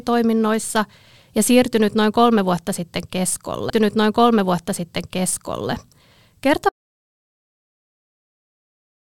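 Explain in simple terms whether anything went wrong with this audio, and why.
Two things went wrong. A stream segment repeated: at 3.69 s, about 2 seconds of speech play a second time, with a small blip at the jump back. Then an audio dropout to silence begins at 6.69 s and lasts to the end. The input was likely lost, so there is dead, total silence rather than room tone.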